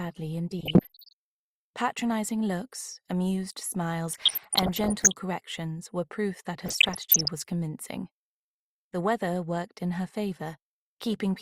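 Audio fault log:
0.59–1.13 s, 4.12–5.12 s, 6.61–7.28 s: DAB burbling. Short blips of noise ride over the audio in each window. The longest is at 4.12 s. Bit errors, at a rate around one percent and somewhat lower in the last burst, are getting past the error correction into the MP2 data. Corrupted samples put short noise blips in single sub-bands, and corrupted scale factors make sub-bands jump in level for up to a frame, across dozens of frames in each burst.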